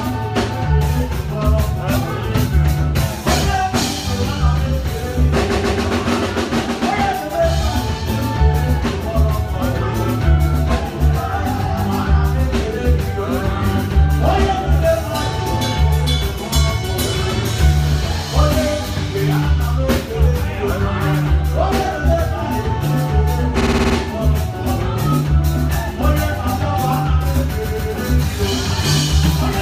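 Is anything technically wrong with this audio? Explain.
Yes. Repeated frames occur at 5.52 s, 23.60 s and 27.64 s, where a short run of compressed frames was delivered more than once. At 5.52 s and 27.64 s a 139 ms block (roughly six frames) plays two extra times, adding about 279 ms each. At 23.60 s a 58 ms block repeats six extra times, adding about 348 ms. The decoder replays the same slice, so each spot stutters and the audio runs longer.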